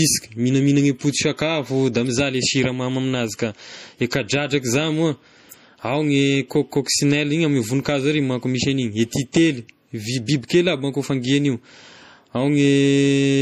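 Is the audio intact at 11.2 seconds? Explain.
No. At 11.2 s, as throughout the speech, the sound is plainly watery and swirly, with chirpy s sounds and nothing above 15.1 kHz. This is likely MP3 compression at a low bitrate, which fits about 40 kbps, with the encoder cutting the treble and dropping weak frequency lines that flicker between frames.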